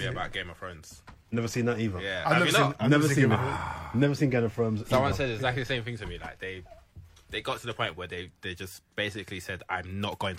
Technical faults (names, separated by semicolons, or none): none